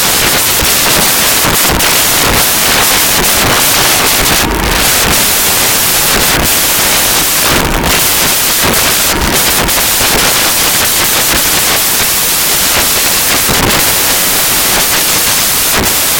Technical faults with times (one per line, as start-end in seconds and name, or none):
0.00-16.19 samples built from the wrong bytes